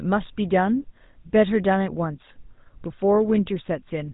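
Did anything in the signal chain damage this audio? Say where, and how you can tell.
Yes. The codec stage damaged it: the speech bears the GSM full-rate codec's buzzy, gravelly roughness throughout, which fits a 13 kbps stream. Its pulse-driven vocal-tract model rebuilds the voice coarsely. A spectrogram shows a hard ceiling at 3.8 kHz, with nothing above it.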